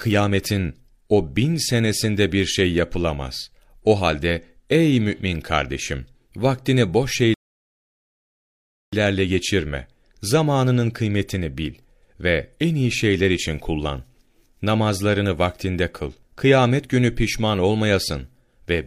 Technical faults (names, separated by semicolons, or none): rebuffering stall